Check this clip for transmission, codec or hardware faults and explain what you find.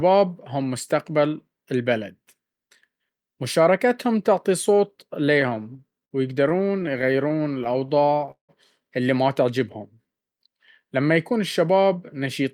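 The speech is interrupted by three kinds of network playback fault, all from 5.4 s onward.

From 5.41 to 6.13 s and again from 6.49 to 7.90 s, the speech hitches and drags in repeated stalls (stutter): 8 short gaps (longest 58 ms), then 14 (none over 20 ms). Late packets kept emptying the jitter buffer, and the receiver stretched the last sound to fill each gap.

From 7.33 to 8.16 s and from 9.59 to 11.14 s, the speech runs slower at unchanged pitch, at 92% and 91% speed, adding 77 ms and 152 ms. This is jitter buffer slow-down: repeated pitch periods rebuilding the buffer's reserve.

At 8.31 to 8.51 s a call audio freeze stops the speech, with about 120 ms of near silence, then resumes where it left off, likely because delayed packets drained the jitter buffer.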